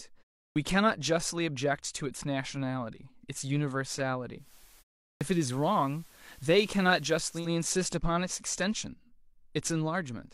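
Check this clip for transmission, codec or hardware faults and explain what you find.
Two faults are present in this speech: clipped starts after pauses, and a digital radio blend to analogue.

Clipped start after a pause, at 0.46 s and 5.10 s: the output device dozes during the 0.31 s and 0.35 s silences and wakes late. Each time, about 0.1 s of onset vanishes, so speech begins abruptly. The pauses themselves fall fully silent as expected.

Digital radio blending to analogue, from 4.36 s to 7.5 s: the receiver lost its digital stream and cross-faded over 162 ms to the FM broadcast. Faint hiss, roughly 30 dB down, appears without any level change.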